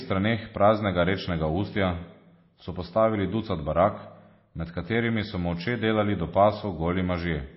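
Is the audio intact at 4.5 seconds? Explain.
No, at 4.5 s the speech carries the same damage as the rest of the clip, likely from MP3 compression at a starved bitrate, something like 24 kbps. The encoder has cut everything above 5.6 kHz and keeps dropping weak detail, so the sound is dull, watery and swirly.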